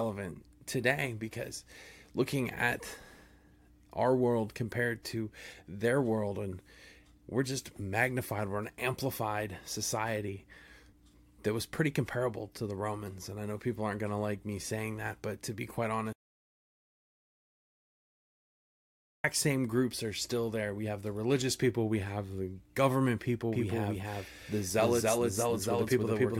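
At 16.13 s the speech cuts out abruptly and does not return until 19.24 s, an audio dropout to silence lasting 3.11 s. The gap holds no room tone at all, which points to the input likely having been lost while the recorder kept writing silence. On a waveform it is a flat line; on a spectrogram, a dark band with hard vertical edges at both ends. Whatever was spoken in that stretch is missing.

From 23.53 s to the end, a doubled audio track appears: a second, full-band copy of the speech runs roughly 300 ms behind the first, at about the same level. It starts suddenly, with no decay or room colouring, so it is likely a second capture path or an edit leaving two copies misaligned. The waveform shows each syllable repeated as a matching shape offset to the right, and the spectrogram shows every harmonic pattern duplicated a short distance later.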